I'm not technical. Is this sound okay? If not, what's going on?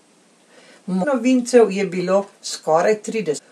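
No. Damaged data in a compressed stream causes two brief glitches, at 1.02–1.05 s before "novincev je" and at 3.37–3.39 s, where the player misreads corrupted pieces of the file.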